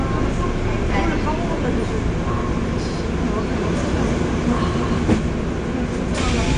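From start to finish the audio is dull, with nothing above 9.6 kHz and plainly audible smearing in the spectrum. This points to AAC compression, likely AAC-LC at a low bitrate around 32 kbps, where the encoder lowers its cut-off and coarsely quantises the remaining bands.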